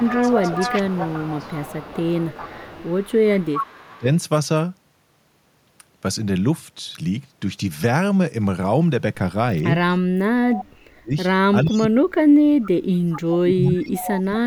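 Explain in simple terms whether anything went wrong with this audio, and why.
Two faults show up, both typical of a call where one side uses a loudspeaker.

The first is speech suppressed in double talk. The voice dips noticeably from 0.0 to 1.5 s, briefly from 3.71 to 4.07 s, then much harder from 10.49 to 11.13 s and from 11.52 s to the end, where it nearly cuts out in pieces. The likely cause is both sides talking at once: the echo canceller couldn't tell the local talker from the loudspeaker's sound, so it turned everything down.

The second is echo leak. A quieter copy of the voice follows it about 0.4 s behind, most clearly across the first 4 s and again from 13.67 to 14.36 s. Shorter scraps appear at 10.55 to 10.64 s and 11.64 to 11.85 s. The likely cause is that the echo canceller on the loudspeaker side didn't remove all of what its microphone picked up from the speaker, so that leftover sound was sent back down the line.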